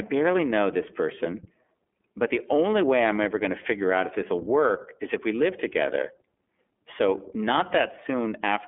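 Speech runs through the iLBC codec for its whole length. Nothing passes above 3.6 kHz. The coding damage is plainly audible, a rough, synthetic edge, which fits independently coded 30 ms frames.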